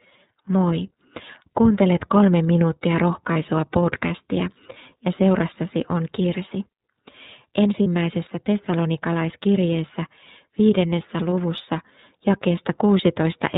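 Finnish speech runs through the iLBC codec for its full length. Nothing above 4 kHz survives, and the voice has a plainly audible rough, slightly synthetic edge. The coarseness fits iLBC's 13.33 kbps mode with 30 ms frames. A plain telephone band-limit would sound muffled but smooth. The grainy, processed texture points to a low-rate speech codec rather than filtering alone.

Two brief lost iLBC frames interrupt it. The first runs from 3.33 to 3.36 s, after "kolme minuuttia" and before "podcastia ja seurassasi on". The second runs from 7.83 to 7.86 s, just before "tessalonikalaiskirjeessä viidennessä luvussa". Each gap lasts about 30 ms, consistent with a single lost packet. The decoder fills it by repeating the last pitch cycle with added noise, so it sounds like a short buzzy, held vowel. A plain dropout would leave silence or a click instead. The voice also comes back clean immediately, because each iLBC frame decodes independently. 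Codecs whose frames depend on earlier ones smear for longer after a loss.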